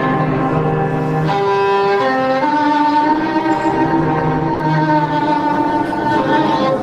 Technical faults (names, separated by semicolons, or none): sound dropped by the voice detector